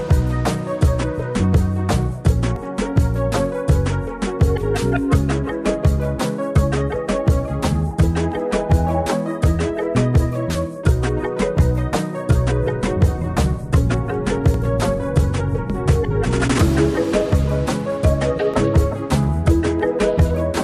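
At 2.56, 6.56, 10.55, 14.54 and 18.54 s the sound skips, a few milliseconds vanishing every 4 s. This is likely audio missing between chunks at 4-second boundaries. The waveform shows an abrupt splice and the spectrogram a thin vertical seam.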